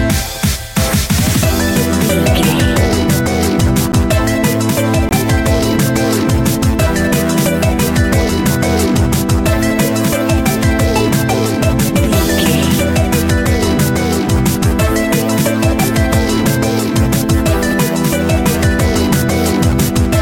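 At 3.92 s there is a block of digital silence lasting 10 ms. A run of samples has been replaced by zeros. The sound drops straight to nothing and returns with no fade. This short gap is heard as a tick. At 5.09 to 5.11 s a second block of digital silence lasts 20 ms. It is twice as long. The abrupt cut and return make it more of a pop, with a short hole.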